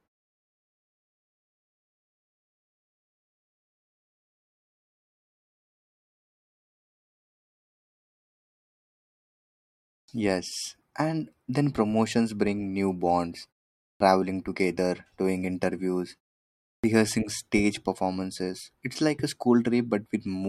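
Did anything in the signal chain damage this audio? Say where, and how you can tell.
Yes. Clipped start after a pause, at the playback device: after silences of 10.0, 0.52 and 0.68 s, speech resumes abruptly at 10.04, 13.96 and 16.8 s, missing 43, 43 and 36 ms. The output wakes late from sleep. Waveforms show hard vertical onsets, and spectrograms lack the energy of the first sounds.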